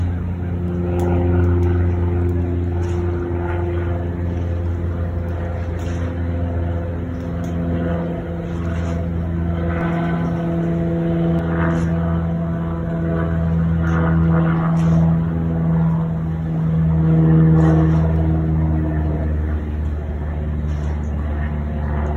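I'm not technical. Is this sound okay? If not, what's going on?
No. From 9.81 to 11.39 s there is a doubled audio track. A second, quieter copy of the sound trails about a tenth of a second behind. It starts and stops suddenly. Likely a slower second recording path got mixed in.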